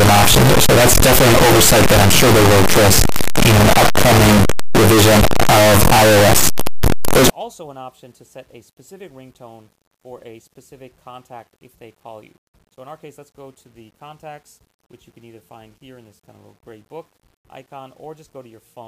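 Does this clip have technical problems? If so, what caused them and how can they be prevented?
Yes. From the very start to about 7.30 s the sound is harsh and very loud, with quiet stretches blasting as hard as everything else. That's signed and unsigned mixed up, likely from 8-bit samples being read with the wrong signedness. The top bit flips, so every zero crossing jumps across the full range. To prevent it, make sure the declared sample format matches the data before decoding.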